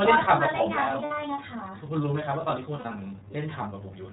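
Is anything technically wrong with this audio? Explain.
Yes. The speech has been passed through the iLBC codec, and it also has two dropouts from lost iLBC frames.

The iLBC codec is active for the whole clip. The system coded the speech as a narrowband VoIP stream in 30 ms frames, which points to iLBC's 13.33 kbps mode. Each frame's excitation is coded on its own, and nothing above 4 kHz survives. The coding damage is plainly audible. The voice sounds band-limited and muffled at the top, with a rough, slightly synthetic grain.

Lost iLBC frames occur at 1.05 to 1.12 s and at 2.75 to 2.85 s. Packets went missing, consistent with about two 30 ms frames in the first gap and three in the second. The decoder filled each hole by repeating the last pitch cycle mixed with noise. Both gaps come out as a briefly held, buzzy or breathy vowel. Because iLBC frames stand alone, the speech snaps back almost immediately after each gap.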